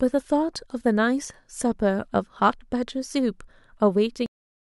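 At 4.26 s the speech stops abruptly in the middle of a sound, with no natural decay, and falls straight to digital silence for the remaining 0.44 s or so. This is a cut-off end: the final stretch of audio buffers was never written out or played, so the recording ends where the data ran out rather than where the sound finished. The sound is sliced off instead of fading.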